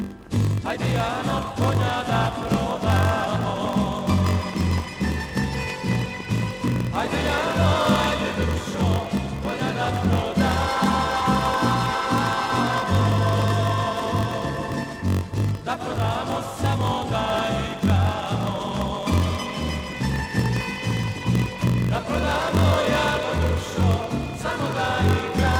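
From start to finish, a block size mismatch (padded) puts a steady buzz near 46.9 Hz over the sound. One stage delivers shorter blocks than the next reads, which fits 1024-sample reads, and the shortfall in each block is filled with silence. Those tiny gaps repeat at the block rate and make the buzz. The sound also runs slow, at 0.938 times normal speed, yet keeps its timbre. A sample-rate error would lower the pitch along with the speed.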